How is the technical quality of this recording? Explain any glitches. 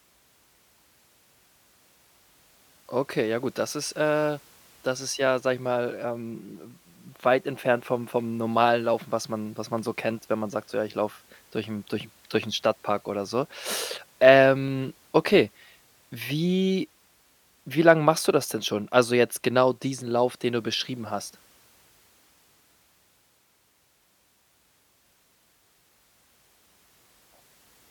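One glitch stands out in this speech recording. A dropped buffer (overrun) at 14.68 s: the sound jumps forward, likely because the samples were overwritten before the program read them. About 15 ms is lost, and the two edges meet directly, with no silence between.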